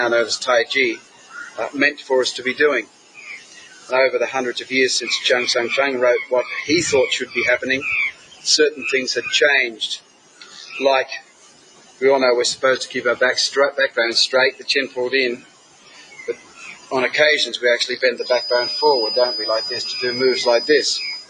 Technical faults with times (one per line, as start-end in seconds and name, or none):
0.00-21.30 noise suppressor applied to music or sounds
0.96-1.59 sound cut by the noise suppressor
1.94-2.10 sound cut by the noise suppressor
2.83-3.92 sound cut by the noise suppressor
8.11-8.46 sound cut by the noise suppressor
9.72-10.73 sound cut by the noise suppressor
11.19-12.01 sound cut by the noise suppressor
14.52-14.68 sound cut by the noise suppressor
15.37-16.92 sound cut by the noise suppressor
18.11-21.30 feedback whistle